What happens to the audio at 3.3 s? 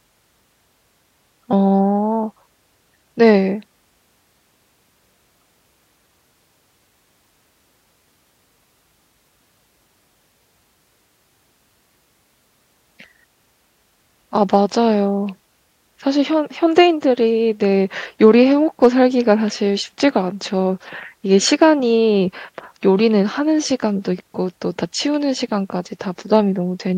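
Hard clipping from 3.27 to 3.30 s: a speech peak overdrives a stage by about 1 dB, so its tops are cut flat, giving a brief crackle.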